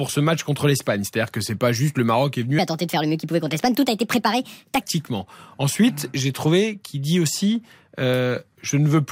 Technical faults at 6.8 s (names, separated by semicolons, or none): none